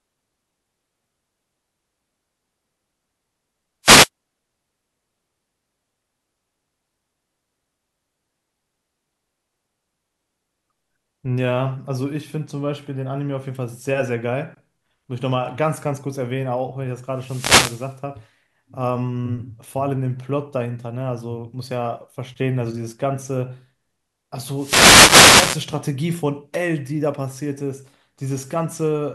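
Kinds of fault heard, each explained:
Wireless microphone noise hit: an analogue FM radio link losing signal strength as reflected paths cancel at the receiver, letting the receiver's own noise rise into the audio. Here it appears as three bursts of static or swish over the speech, at 3.83 to 4.09 s, 17.10 to 17.99 s, and 24.53 to 25.69 s. They grow longer through the clip, from about a quarter second to over a second.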